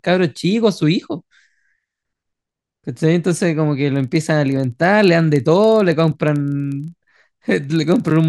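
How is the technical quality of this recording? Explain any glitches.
The recording is clean until 3.96 s, when a filter restarted on every block sets in and continues to the end. From that point a filter in the processing chain loses its internal state at each block boundary and starts again from silence, so every block opens with a small transient. These repeat at 25 Hz, one every 40 ms, which points to a block length of 40 ms. They are heard as a low buzz under the speech that rises and falls with its level.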